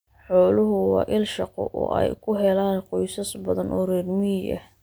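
No technical faults are audible in this recording.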